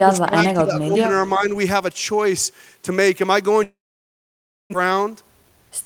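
From 0.00 to 1.07 s, the echo canceller likely could not separate the near talker from loudspeaker echo while both sides spoke, so it turned the speech down. This is speech suppressed in double talk. For around 0.7 s of that span the speech dips by as much as about 15 dB. Between 0.97 and 1.01 s, the loudspeaker side's canceller likely failed to remove everything its microphone picked up. This echo leak sends back a faint copy of the speech, about 25 dB below it and delayed by 374 ms. From 1.35 to 1.51 s the double-talk suppression returns more mildly, with a dip of about 5 dB. From 3.63 to 4.76 s, packets likely stopped arriving in a long network dropout, and 920 ms of speech never played. The receiver extends the last sound as a fading buzz, which gives way to near-silence until the audio resumes with that part missing. From 4.84 to 5.72 s, a jitter buffer speed-up trims short pitch-period pieces, about 100 ms in total, so the speech runs at 110% speed with unchanged pitch and sounds hurried.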